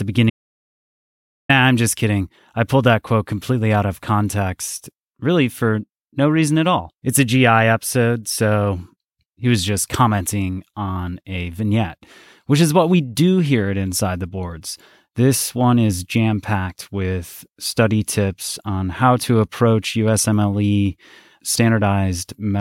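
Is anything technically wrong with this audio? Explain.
Yes. From 0.30 to 1.49 s the speech drops out to silence, losing about 1.19 s of audio. The sound cuts off abruptly mid-flow and returns just as abruptly. The gap is dead digital silence with no room tone or hiss. The input was likely lost briefly, through a disconnect, link failure or accidental mute, while recording continued to write silence. A natural pause or noise gate would fade or leave residual background; this gap leaves nothing at all.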